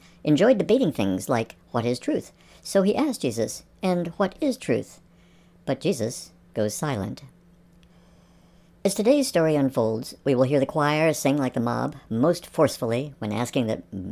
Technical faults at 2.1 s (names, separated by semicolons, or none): wrong sample rate